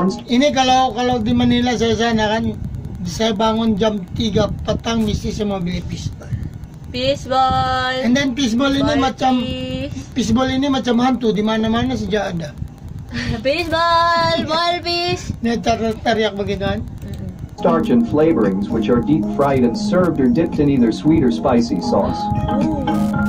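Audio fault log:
Throughout, Wi-Fi interference: a steady ticking runs beneath the audio at just under ten clicks a second, evenly spaced 102.4 ms apart and sitting roughly 35 dB below the wanted sound. A Wi-Fi radio close to the equipment is sending its beacon on that fixed interval, and part of the audio circuit behaves as a detector, rectifying each brief radio burst into a short pulse that lands in the audible band as a click.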